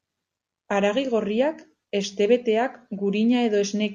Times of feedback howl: none

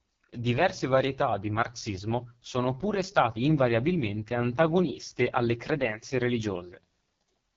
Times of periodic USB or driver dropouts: none

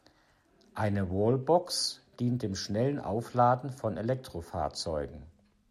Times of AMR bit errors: none

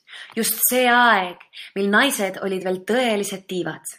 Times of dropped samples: 3.27

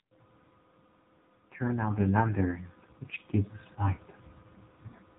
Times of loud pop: none

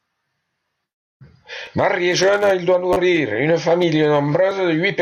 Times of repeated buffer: 1.66, 2.93-2.96

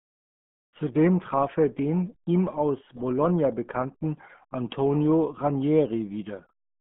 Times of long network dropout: none

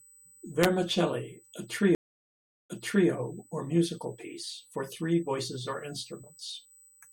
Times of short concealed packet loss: none

